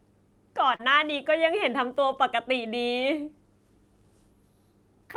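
Short concealed packet loss at 0.75 to 0.81 s: about 40 ms of the speech arrived too late to decode, so the receiver stretched the preceding sound into the gap for roughly 37 ms before blending back. It is heard as a brief smeared wobble.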